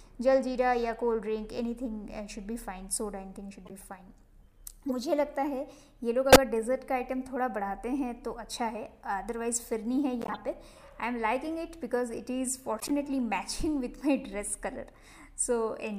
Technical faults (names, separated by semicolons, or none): corrupt frame decoded